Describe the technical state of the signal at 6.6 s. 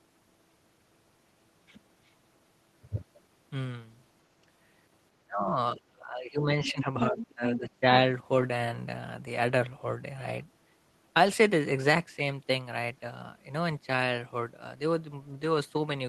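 At 6.6 s the talker is caught in speech suppressed in double talk, running from 5.76 to 6.9 s. The level sinks by as much as about 25 dB, likely because the echo canceller could not separate the near talker from the loudspeaker echo and attenuated both. Unlike a plain dropout, the voice dips and thins rather than vanishing cleanly.

Just after that moment, from 6.65 to 6.83 s, the other side's voice leaks through at roughly 10 dB below the talker. The likely cause is loudspeaker sound the canceller failed to remove from the microphone. It is a second voice layered in, not a muffling of the talker's own voice.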